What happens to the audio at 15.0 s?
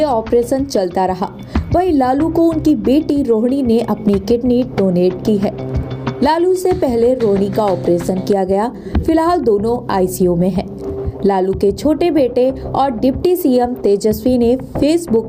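Gain pumping is audible at 15.0 s, as it is through the whole clip. The input level sounds set far too hot, so a fast limiter or compressor is likely clamping down on every loud sound. The gain swings by something like 15 dB, and the dynamics come out flattened and squashed, loud and soft parts sitting close together.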